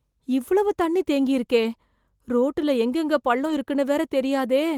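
At 1.63–1.65 s after "இவ்வளவு தண்ணி தேங்கியிருக்கே", and 3.45–3.51 s after "ரோட்டுல எங்கெங்க", a lost packet rebuilt from error correction: low-bitrate backup copies fill the gaps, sounding briefly rougher and noisier.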